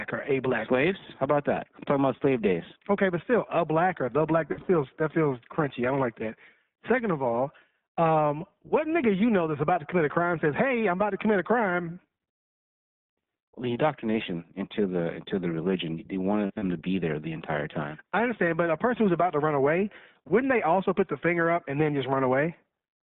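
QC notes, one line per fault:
Throughout, iLBC codec: the speech has been squeezed through a narrowband VoIP codec at what sounds like around 15 kbps. The line runs roughly 150 Hz to 3.6 kHz, so there's nothing up top, and the damage is plainly audible. Each 20 ms frame gets its excitation coded on its own, which leaves the voice intelligible but a bit rough and synthetic, like it's been rebuilt rather than passed through.
4.48 to 4.70 s and 16.46 to 16.64 s, lost iLBC frames: two spots where packets went missing, first right after "black or the black" and before "that feels crunchy I", then after "into the religion they" and before "to be there the". About 140 ms is lost in the first, scattered across some 200 ms with the longest run around 70 ms. The second loses about 100 ms across 160 ms, longest run around 40 ms. The decoder fills each hole by repeating the last pitch cycle with noise mixed in, so you get short held, buzzy vowel smears. 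Since frames stand alone, the voice snaps back almost immediately after.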